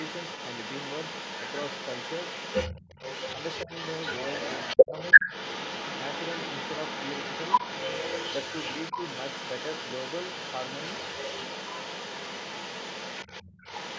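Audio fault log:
Throughout: other side's voice leaking through. A second voice runs under the talker for the whole clip, at roughly the same loudness as the main speech rather than as a faint trace, so the two compete directly. The likely cause is the far side's audio playing from the talker's loudspeaker, being picked up by the microphone, and not being fully removed by the echo canceller. That leaves it sitting in the sent signal alongside the talker's own speech.
3.66–3.70 s, 4.86–4.92 s, 5.20–5.25 s: speech suppressed in double talk. The talker's voice briefly sinks in three short bursts, each lasting only a few tens of milliseconds. The deepest dip comes at 4.86 s, around 15 dB down. The first is moderate, and the one at 5.20 s is slight. These gaps likely come from the echo canceller turning everything down while both sides spoke at once, because it could not tell the talker's speech from the loudspeaker echo.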